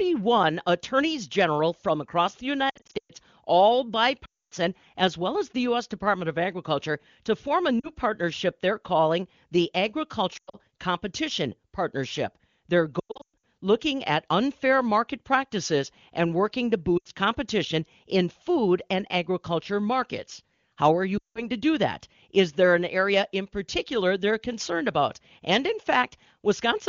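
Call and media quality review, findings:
Lost AMR speech frames at 2.70–3.11, 4.25–4.54 (before "as well as the"), 7.80–7.89, 10.37–10.58, 12.99–13.43, 16.97–17.08 and 21.17–21.47 s. Brief warbles and drops to near silence within two frames in runs up to 260 ms. Radio-link errors; the AMR-WB decoder repeats last-good parameters with decaying gain.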